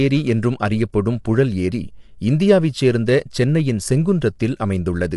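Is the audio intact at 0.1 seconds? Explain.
No, at 0.1 s, as throughout, the speech sounds rough and grainy with nothing above 11.6 kHz, likely low-delay AAC compression whose short frames blur harmonics, fitting a low bitrate near 32 kbps.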